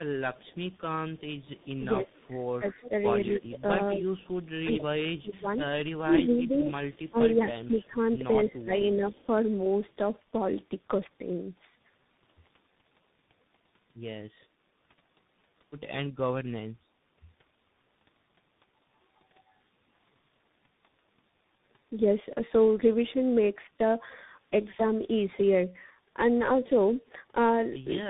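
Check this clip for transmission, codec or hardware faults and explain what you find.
Yes, three kinds of fault are present: tandem speech coding throughout, speech suppressed in double talk, and echo leak.

Tandem speech coding runs through the whole clip. The speech was coded and decoded repeatedly, ending in something that fits CVSD. Nothing is present above 3.8 kHz, so it sounds muffled, rough and warbly.

Speech suppressed in double talk occurs from 1.78 to 4.06 s and from 4.63 to 7.98 s. The level dips by roughly 15 dB in the first stretch, about half a second in total. In the second it dips by roughly 20 dB, about two seconds in total. An echo canceller likely turned the talker down while both sides spoke.

Echo leak appears from 5.46 to 5.58 s and from 6.27 to 8.01 s. A faint copy of the speech trails 225 ms behind, about 30 dB down and then about 25 dB down. The likely cause is loudspeaker sound that an echo canceller failed to remove.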